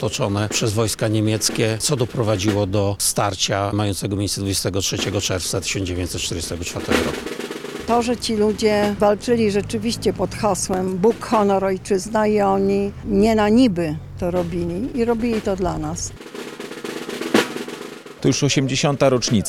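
Two loud pops break through the audio, a stronger one at 10.74 s peaking about 10 dB above the signal and a softer one at 18.33 s at about 5 dB. Each is a single sharp thump lasting roughly 20 ms, likely from a voltage spike from a plug, switch or static discharge. The sound carries on unbroken beneath both, which sets them apart from a dropout or gap.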